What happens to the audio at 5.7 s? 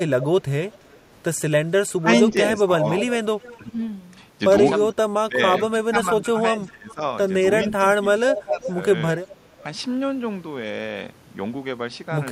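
The speech dips and thins in pieces, falling by roughly 20 dB, between 4.84 and 9.64 s. This is likely speech suppressed in double talk, with the echo canceller turning down both its own talker and the loudspeaker echo. From 5.63 to 5.68 s, a faint scrap of the voice returns well below the speech, 381 ms late. This is likely an echo leak from a loudspeaker that the canceller missed.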